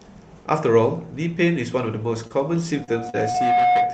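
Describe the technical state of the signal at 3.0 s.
At 3.0 s a loudspeaker feedback squeal is sounding. It began at 2.73 s and runs to the end. A 722 Hz tone rises over about a second to about 5 dB above the speech.

A short concealed packet loss follows at 3.10 to 3.16 s. A 40 ms gap was filled by extending the preceding sound, heard as a brief smear.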